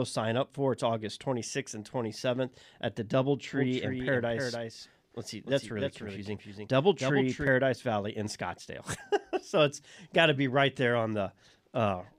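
A doubled audio track runs from 3.53 s to 7.47 s, beginning just after "at the". A second full-band copy of the speech trails the original by roughly a third of a second, sitting around 5 dB quieter, with no reverberant tail or room colour to it. The likely cause is the same signal reaching the mix twice, once through a slower path. The copy cuts in and drops out abruptly at both ends.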